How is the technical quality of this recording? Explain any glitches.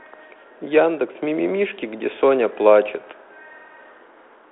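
No glitches or faults can be heard anywhere in the recording. The speech comes through a G.726 ADPCM telephone path at 32 kbit/s, so it is confined to a line band of roughly 300 Hz to 3.5 kHz with nothing above 3.8 kHz, and the coding leaves only light, level-following texture on it.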